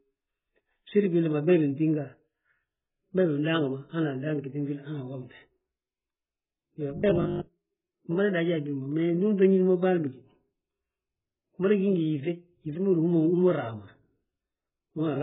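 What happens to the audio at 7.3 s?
Right around 7.3 s you're in the middle of a robotic sound from repeated short buffers, running from about 6.98 s to 7.48 s. For that half second the speech turns into a stiff, metallic buzz at 50 Hz that still roughly tracks the talking. The likely cause is audio arriving too slowly, so the playback keeps looping the last chunk. A 50 Hz buzz points to 20 ms repeats. About half of that stretch is repeated material rather than fresh audio.

Underneath that, and through the whole clip, there's AAC compression, heavy enough that nothing survives above 3.7 kHz. That gives the speech a dull, smeared, band-limited quality with a warbly, fizzy edge on sibilants. It sounds like AAC-LC squeezed to a very low bitrate, which fits something around 8 kbps. At that rate the encoder throws away the high frequencies and coarsely quantises what's left.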